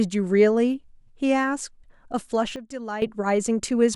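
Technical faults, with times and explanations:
2.56 to 3.02 s, sudden gain jump: speech and background noise drop together by about 12 dB instantly, likely from a gain change applied without a ramp.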